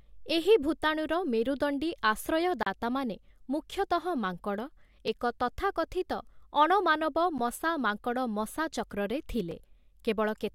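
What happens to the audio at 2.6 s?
Right around 2.63 s the speech drops into a block of digital silence, running to about 2.66 s, so roughly a 35 ms hole. The audio there is replaced by silence, and the signal cuts out and comes back with no fade at either edge. At this length it lands as a short, abrupt dropout rather than a single tick.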